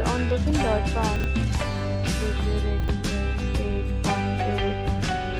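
At 1.16 s the sound briefly jumbles until 1.24 s. Two 40 ms chunks are out of order. One chunk arrived one slot late and plays after the chunk that should follow it. Nothing is missing, but the sequence is wrong. The swap creates three hard joins. The same fault returns at 2.80 s and runs to 2.88 s. Again two 40 ms chunks swap places, with the same scrambled moment.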